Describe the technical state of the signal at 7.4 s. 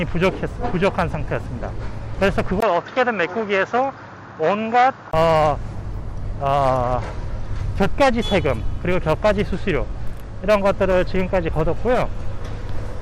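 At 7.4 s the signal is intact, with no fault present at that point.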